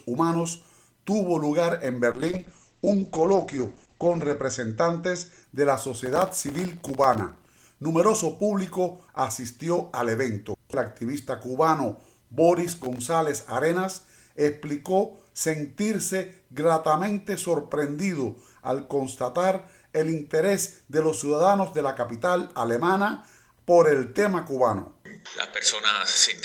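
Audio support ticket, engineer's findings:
Call bitrate drop, 2.13–5.49 s: encoder falls from 32 to 10 kbps, top end cut from 20 kHz to 8 kHz. Continuous muffling, no gaps, unlike loss.

Processor overload crackle, 5.99–7.67 s and 12.68–12.98 s: grit from many missed buffers of a millisecond or two, each a tiny silent hole. Too short to be packet-loss dropouts.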